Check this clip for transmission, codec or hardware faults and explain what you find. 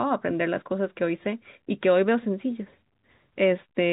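I can't hear any transmission, codec or hardware fault in the clip. The speech carries the narrow band of G.711 telephone coding, with nothing above about 3.8 kHz, which fits a 64 kbps A-law telephone channel.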